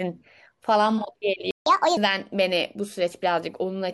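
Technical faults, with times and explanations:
1.51–1.66 s, playback stall: the speech just drops out for about 150 ms, likely because the player ran dry or its thread got blocked.
1.66–1.97 s, catch-up at higher speed: once it recovers, the speech runs at 1.5x, so the pitch jumps around seven semitones while the player eats its backlog, then settles.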